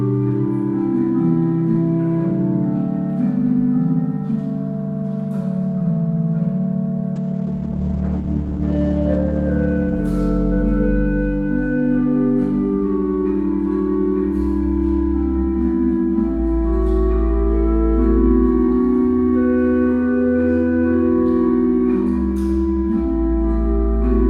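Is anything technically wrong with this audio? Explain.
Yes. From 7.17 to 11.49 s, a call bitrate drop starves the encoder, which codes coarsely and cuts the highs. The sound turns muffled and watery for about 1.8 s at its worst, and the spectrogram's upper band goes blank.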